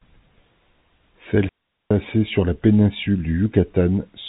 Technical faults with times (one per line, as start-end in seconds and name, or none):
1.49-1.91 digital wireless dropout